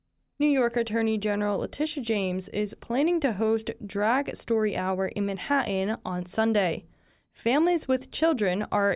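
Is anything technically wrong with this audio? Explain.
No, no technical faults detected.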